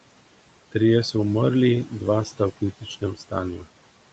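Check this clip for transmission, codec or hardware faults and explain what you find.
The faults come from the noise suppressor rather than the codec or the hardware. It processes the whole clip and also clips speech at two points near the end.

Noise suppressor artifacts run throughout. The suppressor pulls the steady room noise, sitting about 17 dB below the speech, down by about 18 dB in each frequency band, frame by frame. The background sinks in pauses and rises under speech.

Speech cut by the noise suppressor occurs from 3.01 to 3.33 s, with a deepest drop of about 16 dB, and from 3.57 to 3.67 s, with a drop of about 12 dB. In each case roughly a tenth of a second of speech is affected. The suppressor mistook low-level speech energy for noise and attenuated it, so those stretches sound swallowed and faint. The Opus path at 32 kbps has an 8 kHz upper limit throughout, which is normal.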